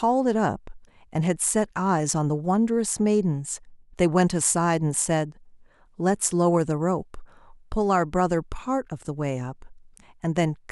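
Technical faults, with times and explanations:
No technical faults can be heard in this speech recording.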